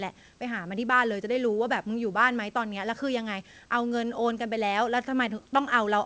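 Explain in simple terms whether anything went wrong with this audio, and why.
Listening to the recording, nothing stood out as having gone wrong with the audio.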